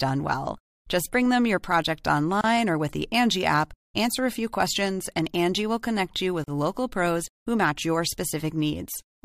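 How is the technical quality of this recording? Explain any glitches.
The speech is broken twice by short dropouts, each a gap at a join of encoded pieces. The first, about 29 ms, falls at 2.41 to 2.44 s, after "bring them your project" and before "or with the". The second, about 40 ms, falls at 6.44 to 6.48 s, after "will connect you with" and before "local pros who match". The gaps are spaced 4 s apart. Each cuts the sound with smeared edges, then resumes where it stopped, because separately encoded segments were joined with their start delay and end padding left untrimmed.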